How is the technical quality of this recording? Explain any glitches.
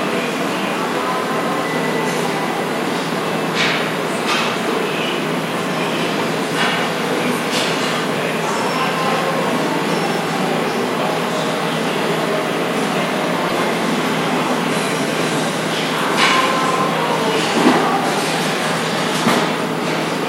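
There is one glitch, at 13.48 to 13.52 s. A broken MP3 bit reservoir is the likely cause. After frames were lost, the next frame borrowed data from earlier frames that weren't its own, so the audio jumps ahead and comes out briefly as a chirp, noise burst or gap. The 40 ms span fits roughly two 24 ms frames. A spectrogram would show a narrow vertical disturbance, and the waveform would show an abrupt discontinuity.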